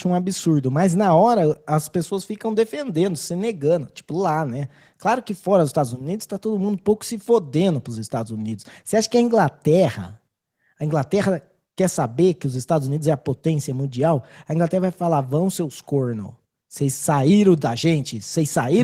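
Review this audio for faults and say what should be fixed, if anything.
Nothing needs fixing; no faults can be heard here.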